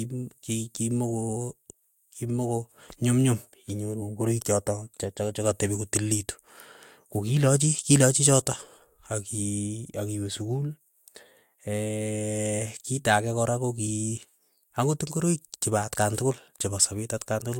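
No technical faults are audible.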